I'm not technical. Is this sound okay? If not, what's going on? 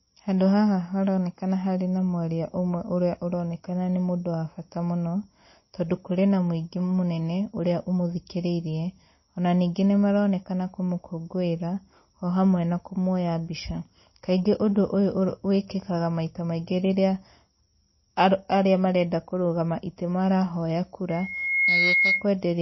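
No. The speech was likely squeezed hard by MP3 compression, so everything above about 5.8 kHz is gone, making it dull, watery and swirly throughout.

A loudspeaker feedback squeal starts at 21.09 s, just after "marenda kũrũgama itĩ marahoya". The microphone picked up its own loudspeaker, so a shrill 2.2 kHz tone swells over about half a second, overpowers the speech, and stops at 22.28 s.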